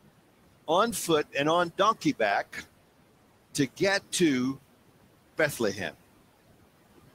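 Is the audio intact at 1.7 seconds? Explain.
No, noise suppressor artifacts run through the whole clip: room noise is pulled down about 18 dB between phrases and swells under speech, unlike a gate's abrupt on-off cuts.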